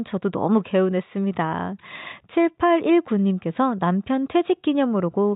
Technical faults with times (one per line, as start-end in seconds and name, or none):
none